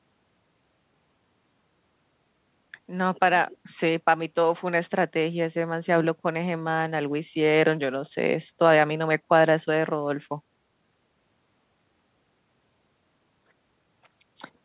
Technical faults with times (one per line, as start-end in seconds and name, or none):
none